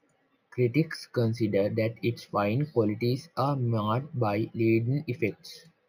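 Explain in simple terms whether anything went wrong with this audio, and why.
Throughout the speech, the sound shows imaging from linear upsampling. The sample rate was raised by joining samples with straight lines, which fits a step from 16 kHz to 48 kHz. That dulls the top, leaving faint mirrored copies between 8 and 16 kHz that give the hissy sounds a light metallic shimmer.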